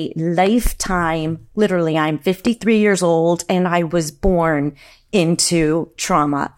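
At 0.47 s a loud pop cuts in, followed by a second one before 0.69 s, and a single pop follows from 2.47 to 2.49 s. Each is a sharp thump peaking around 10 dB above the speech, which keeps going underneath without a break. The cause is likely a sudden voltage step or pulse, from a plug, a switch, static or a driver glitch, that the later circuitry shaped into a short burst.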